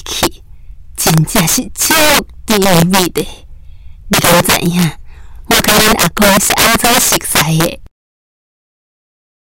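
Integer overflow runs through the whole clip: the signal is pushed about 14 dB too hot, and a small share of samples exceeds the integer limit and wraps to the opposite sign instead of being held. Each loud peak becomes a violent crack, far harsher than clipping's flattened buzz.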